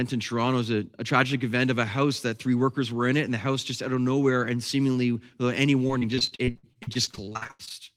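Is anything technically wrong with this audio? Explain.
Yes. From 5.87 to 7.72 s, right after "and seemingly without any", there is repeated packet loss (robotic sound). About two dozen dropouts, up to 81 ms each, are patched by extending the preceding sound, covering 37% of the stretch. The speech turns choppy, with pieces missing. A spectrogram shows frozen, smeared harmonic bands, and the waveform shows repeated, blocky segments.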